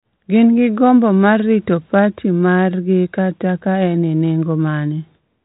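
No technical faults occur anywhere in the speech, which runs through a G.726 ADPCM path at 32 kbit/s that is working as intended.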